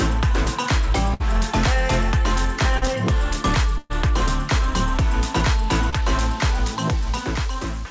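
At 1.14 to 1.22 s a burst of packet loss drops about 60 ms of audio. The receiver extends the last sound for 58 ms while fading it, so a held buzz or thinning hiss stands in for the missing stretch before the audio picks up further along. The same fault returns at 3.78 to 3.92 s with a longer gap, about 120 ms, concealed over 119 ms with no silence, producing a more drawn-out fading continuation before playback jumps forward.

A short concealed packet loss occurs at 2.78 to 2.83 s: roughly 40 ms never reached the decoder in time, and 37 ms of synthesised continuation, pitched or noise-shaped to match what came before, is cross-faded back into the real signal, heard as a brief smear or wobble. A second one at 5.90 to 5.94 s covers about 20 ms with 26 ms of fill, a quicker smear or blur. Throughout, nothing sounds above 8 kHz, which fits a wideband call codec such as G.722 at 64 kbps.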